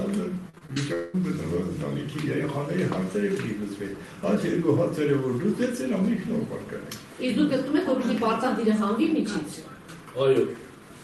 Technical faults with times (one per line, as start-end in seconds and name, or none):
0.49-1.23 repeated packet loss (robotic sound)